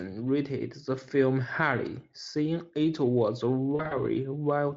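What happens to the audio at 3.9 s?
Right after "highly saying it was", from 3.75 to 4.00 s, the speech breaks up from VoIP packet loss concealed by the speech codec. About 100 ms of audio goes missing in short gaps spread over 160 ms, the longest 40 ms, which points to several lost 20 ms frames. The decoder fills each gap by stretching the last pitch and spectral shape at falling gain, so instead of clean silent gaps you hear a buzzy, smeared, fading tone, and the sound stays weak briefly after packets return.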